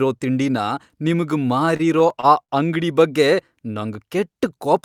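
From about 1.65 s to 2.51 s, right after "ತಿಂಡಿನ ನಿಮ್ಗ್" and before "ಅಂಗ್ಡಿ ಬಗ್ಗೆ", the speech hits repeated stalls, a stutter. Audio was arriving late, so the jitter buffer kept draining and the receiver stretched the last bit of sound to bridge six short gaps, the longest 55 ms. About 131 ms gets filled that way, roughly 15% of that stretch. Nothing's actually lost, but the phrase drags and hiccups.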